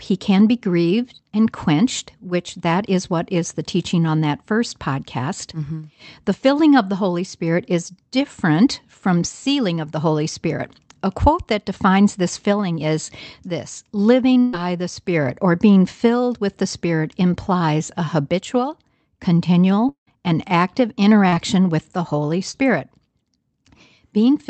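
At 14.39 to 14.55 s there's a burst of packet loss: roughly 140 ms never arrived, so the receiver stretches the last sound into a fading smear before the speech picks up further along.

Around 19.89 to 20.09 s it's most likely a long network dropout. About 180 ms is gone, with a fading fill that leaves about 100 ms of dead silence.

Then come two bits of short concealed packet loss, at 21.29 to 21.36 s (about 40 ms lost) and 22.51 to 22.56 s (about 20 ms). Each sounds like a quick wobble or smear where the decoder patched the gap.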